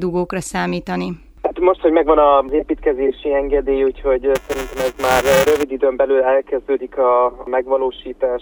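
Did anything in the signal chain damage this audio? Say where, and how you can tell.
Yes, at the driver or buffer stage. From 4.35 to 5.63 s there is buffer tearing, heard as a robotic buzz at 345 Hz. That rate fits a 128-sample buffer. A small slice of each period repeats audio about 10 ms old, with hard joins either side.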